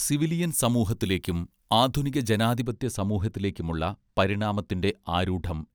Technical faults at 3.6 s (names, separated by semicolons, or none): none